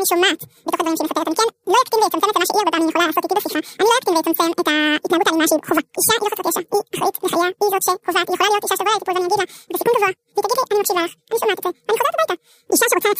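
From start to end, the speech is affected by audio read two samples at a time. Each pair of samples is treated as one frame. So playback runs at double speed and twelve semitones higher, a full octave.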